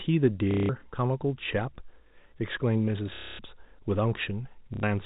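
At 0.51 to 0.69 s, 3.15 to 3.39 s and 4.74 to 4.83 s you get packet loss with the last packet repeated: gaps of 180, 240 and 90 ms filled by looping old audio, which buzzes robotically at roughly 33 Hz, which fits 30 ms packets. It sits on a band-limited G.711 telephone path.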